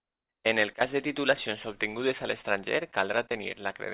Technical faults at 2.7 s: none

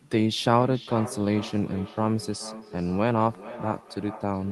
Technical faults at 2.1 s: feedback echo between two devices

